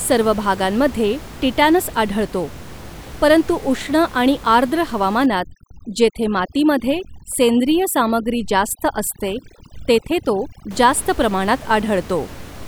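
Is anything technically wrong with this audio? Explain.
Yes. From 5.26 to 10.71 s, after "आणि आर्द्र" and before "जास्त प्रमाणात", overdone noise removal cuts bands near its noise estimate. The background drops and breaks up into twinkling specks. A spectrogram shows scattered isolated specks and gaps in the harmonics.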